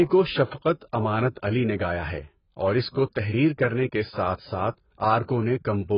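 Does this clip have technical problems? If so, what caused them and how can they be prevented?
Yes. Throughout the speech, everything above 5.1 kHz is missing, so sibilants lose their edge and the sound is dull, smeared and warbling. The likely cause is heavy AAC compression, consistent with AAC-LC at a very low bitrate of around 12 kbps, where the encoder lowers its cut-off and quantises the remaining bands coarsely. On a spectrogram this shows as a hard ceiling at 5.1 kHz. To prevent it, encode speech at 64 kbps or more, or keep a lossless master.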